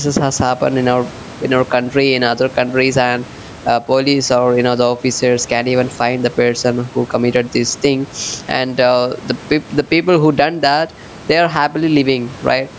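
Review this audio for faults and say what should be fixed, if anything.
Gain pumping runs through the whole clip: the gain swings by around 10 dB, squashing loud and soft together. The likely cause is mic gain set far too high, with a fast limiter clamping each peak. Lowering the input gain so the limiter rarely engages should stop it.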